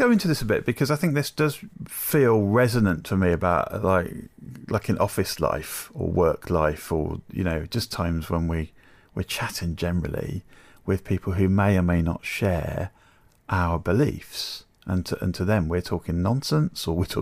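No technical faults turn up anywhere in the recording, and the signal stays intact and continuous across the whole of it.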